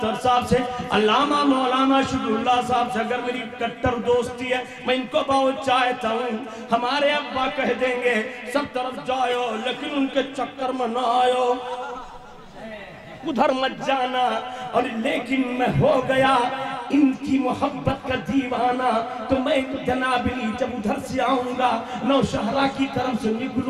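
Nothing in this recording calls for comment, since not a single technical fault turns up anywhere along the way.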